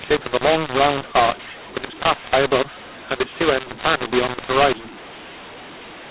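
From start to finish, the speech is damaged by a mu-law and A-law mix-up. The telephone audio was coded as mu-law but decoded as A-law. Levels come out scrambled. The speech sounds harsh and distorted, and pauses fill with noise.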